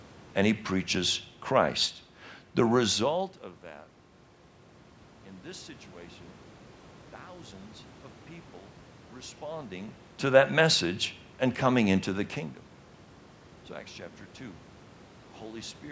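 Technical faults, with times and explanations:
No technical faults found; the level shifts are smooth fader-style moves, the content tops out around 8 kHz as expected from call microphone processing, and the room's background noise sits about 28 dB below the speech.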